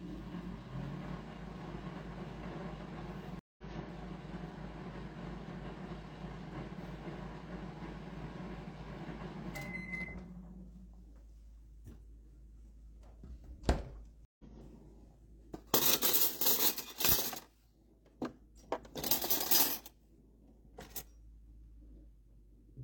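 Stream reconnects at 3.39 to 3.64 s and 14.25 to 14.44 s break this sound recording. The connection dropped and a fresh decoder restarted mid-stream. About 0.19 s and 0.14 s of silence are followed by audio resuming slightly ahead, skipping roughly 0.15 s and 0.1 s respectively.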